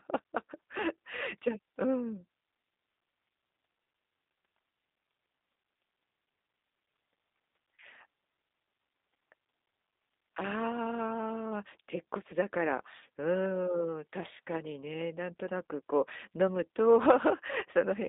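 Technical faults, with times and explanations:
throughout, G.729 codec: the speech was rebuilt by a low-rate model codec, consistent with G.729A at 8 kbit/s, from a vocal tract filter, pitch predictor and sparse pulses per frame. Only 250 Hz to 3.7 kHz survives, sounding thin, rough and plainly synthetic.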